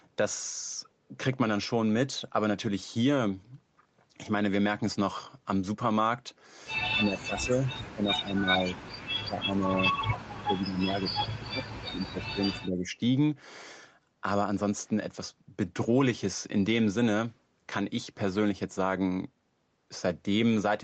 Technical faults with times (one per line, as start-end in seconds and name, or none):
6.94-8.73 speech suppressed in double talk
8.65-8.72 echo leak
9.05-12.94 speech suppressed in double talk